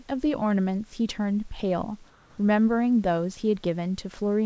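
From 2.10 to 2.38 s the room background, about 32 dB below the loudest parts, becomes a smooth, featureless hiss at an unchanged level. This is likely comfort noise in place of the background: transmission paused and the receiver filled the 0.28 s with synthetic, roughly shaped noise.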